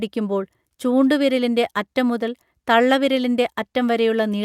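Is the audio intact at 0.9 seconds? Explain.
Yes, at 0.9 s the speech plays through cleanly, with no dropout, click, distortion or other fault to be heard at that moment.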